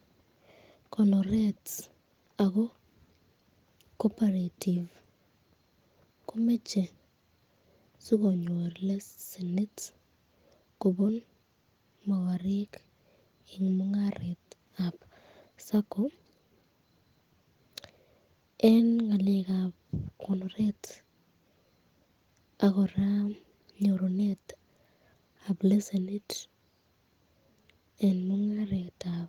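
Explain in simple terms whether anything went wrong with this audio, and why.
Nothing went wrong here as far as I can hear, since the speech comes through steadily the whole way with nothing standing out as a technical problem.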